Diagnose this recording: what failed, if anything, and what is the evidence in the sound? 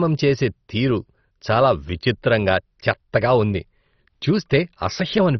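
Codec stage: the speech is dull throughout, with a gurgling, granular texture, likely MP2 compression at a starved rate, consistent with about 32 kbps.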